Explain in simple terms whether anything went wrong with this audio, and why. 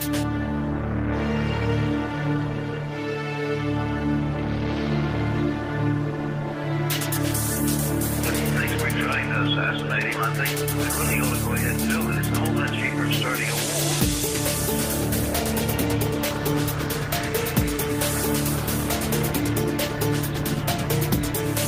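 Listening closely, nothing went wrong that I could hear; no moment in the recording stood out as a problem.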